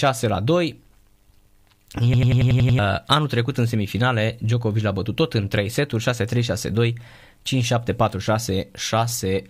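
From 2.14 to 2.79 s a system hang loop: while the system is frozen, the hardware replays one 93 ms buffer, which fits 4096 samples, seven times at 10.8 Hz, a machine-gun stutter. Unlike a dropout, identical sound repeats rather than going silent.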